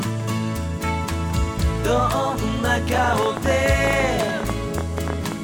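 A train of clicks runs from 2.95 s to 5.33 s: around thirty similar pulses at about 12.2 per second, unevenly spaced, peaking roughly 15 dB above the sound. Unlike random crackle, their matching shape suggests a likely interface or interference source.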